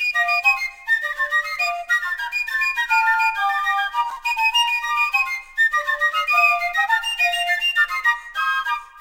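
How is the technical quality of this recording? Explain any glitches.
The recording has one audible glitch in the music. A block of digital silence at 4.10 s: for about 5.8 ms the signal drops to silence and then resumes, with no fade on either side. A length like that fits a 256-sample buffer that wasn't filled in time. Because the waveform jumps abruptly to silence and back, both edges produce a discontinuity, and the gap is too short to hear as a hole. It comes across as a tick or a dip.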